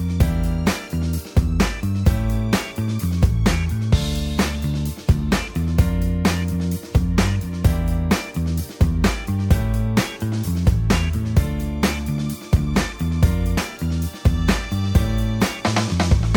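At about 13.56 s the sound jumps abruptly forward with a brief blip, as though a stretch of the programme has been cut out. The likely cause is a stream segment skipped: one chunk of the segmented stream failed to load and the player carried on with the next. On a waveform this shows as a hard discontinuity with a tiny spike; a spectrogram shows a thin vertical broadband line where the material on either side fails to join.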